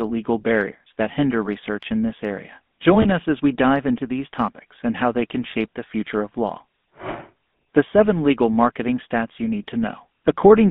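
Speech heard through the GSM full-rate codec throughout, with the buzzy, gravelly roughness that fits its 13 kbps pulse-excited coding. The line is band-limited to about 200 Hz to 3.5 kHz, so a spectrogram shows a hard ceiling near 3.5 kHz and coarse, smeared harmonics below it. From 3.02 to 3.06 s there are lost GSM frames. The gap is concealed by repeating the previous frame's settings, which fits a single dropped 20 ms frame and produces a brief metallic ring. On a spectrogram this appears as a short frozen, repeated spectral slice.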